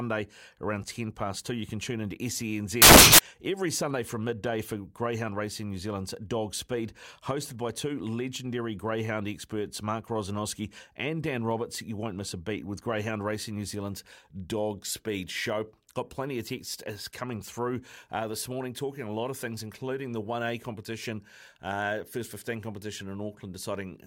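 From 2.82 to 3.19 s the speech gives way to loud, harsh broadband noise: samples built from the wrong bytes. The reader assembled each sample's bytes wrongly, so noisy low bits became the large part. A spectrogram shows flat full-band energy. The waveform becomes a dense, clipped-looking block.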